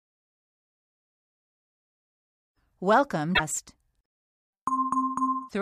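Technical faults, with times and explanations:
3.31–3.40 s and 5.45–5.53 s, damaged data in a compressed stream: two brief glitches of roughly 0.1 s and 0.08 s cut through the sound. Corrupted bytes made the decoder misread those frames and lose sync until it found the next valid frame header.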